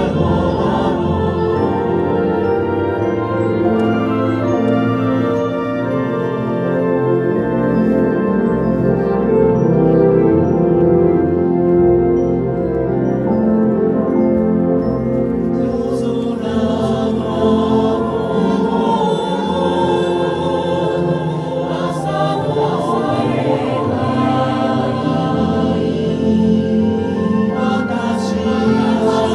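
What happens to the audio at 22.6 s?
At 22.6 s, as throughout the clip, a doubled audio track is heard: a dry, full-band copy trails about a second behind, roughly 5 dB quieter, likely from a second, slower capture path.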